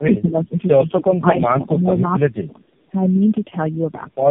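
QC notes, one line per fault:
Throughout: tandem speech coding. The speech passes through three low-rate narrowband speech coders in a row, which fits an AMR-NB type codec, with the audio decoded to ordinary telephone PCM between each. Every stage re-codes the previous stage's errors, so roughness, muffling and warble build up beyond what any single coder produces. Nothing is present above 3.2 kHz. Plain band-limiting would only dull the speech, and one codec pass would warble less.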